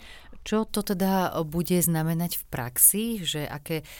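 Pre-emphasis left on from 0.69 s to the end: the speech carries the FM-style 75 µs treble boost without the matching de-emphasis, lifting 10 kHz about 13 dB relative to 1 kHz, so it sounds thin, bright and sharply sibilant.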